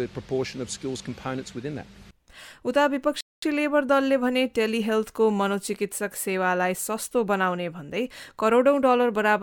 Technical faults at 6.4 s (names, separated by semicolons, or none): none